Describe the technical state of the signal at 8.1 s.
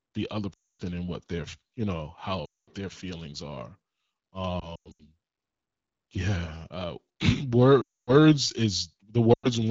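Speech smears briefly, then fades to silence from 7.81 to 8.13 s: lost AMR speech frames, with the wideband decoder stretching the last good frame as gain drops within two frames, 260 ms lost in all.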